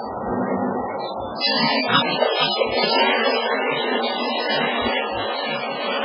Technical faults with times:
0.00-6.04 MP3 compression
1.96-2.87 cable scratch noise

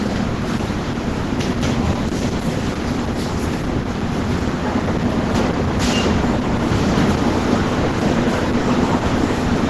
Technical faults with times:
0.00-9.70 Opus compression

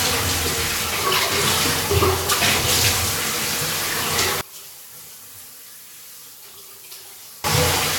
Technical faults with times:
4.41-7.44 one channel inverted

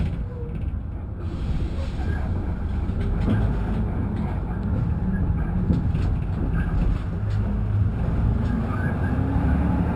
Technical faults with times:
0.00-9.96 imaging from linear upsampling

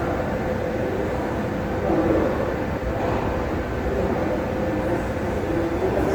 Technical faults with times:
0.00-6.14 Opus compression

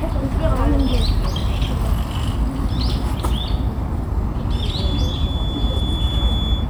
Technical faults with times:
4.70-6.70 feedback whistle

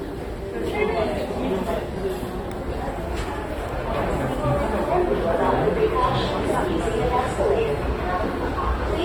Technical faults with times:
0.00-9.05 AAC compression

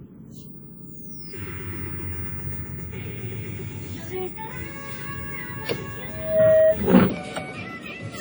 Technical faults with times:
0.00-8.20 WMA compression
6.07-6.81 loudspeaker feedback squeal
7.10-8.20 section at the wrong speed

